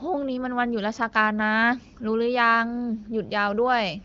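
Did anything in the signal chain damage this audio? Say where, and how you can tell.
No, nothing in the chain damaged this audio.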